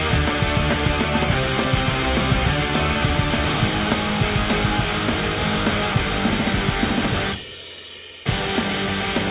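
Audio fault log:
No faults can be heard anywhere in this audio. There is nothing to log against any time in the clip.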